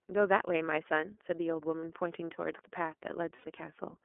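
From start to finish the speech is carried by the iLBC codec. The band is narrow, running from about 250 Hz to 3.4 kHz. There is no low body and no top end above that. The codec damage is plainly audible. Voiced sounds turn rough and a little synthetic. iLBC codes each frame on its own, with no help from the frame before. The coarse, grainy texture fits its 13.33 kbps mode with 30 ms frames.

At 1.80 s there are lost iLBC frames. A gap of 30 ms, which fits one lost frame, is filled by the decoder. It repeats the last pitch cycle and mixes in noise. The result is a brief buzzy hold. Then clean decoding returns at once. At 3.35 s a longer loss runs to 3.45 s. That is 90 ms, which fits three lost frames. Here the concealment holds a breathy, vowel-like buzz that fades. Normal sound resumes immediately after.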